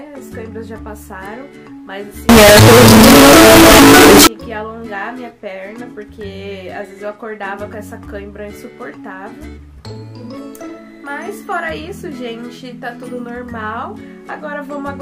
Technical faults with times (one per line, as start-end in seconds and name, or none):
2.29-4.27 float read as integer